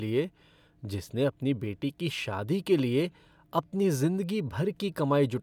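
No dropouts, clicks, distortion or level jumps turn up anywhere in the speech, with no technical fault to report.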